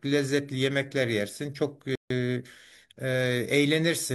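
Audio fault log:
1.95 to 2.11 s, rebuffering stall: playback halts into silence for 150 ms as the player's buffer empties, then the speech resumes exactly where it stopped, with nothing lost.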